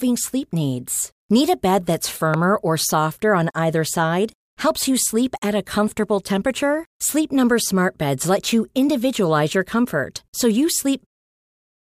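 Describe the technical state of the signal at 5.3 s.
At 5.3 s the speech signal is intact, with no audible fault at that moment.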